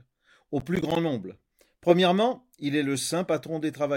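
From 0.61 to 0.96 s the speech picks up a gritty, tearing crackle, a rapid string of tiny dropouts with hard edges that rides on top of the sound and then stops. This is processor overload crackle. The processor fell behind and repeatedly missed its deadlines for short audio buffers, around ten milliseconds each, which fits several misses in a row. Each missed buffer came out as a sliver of silence, and the abrupt cuts in and out produce the crackle.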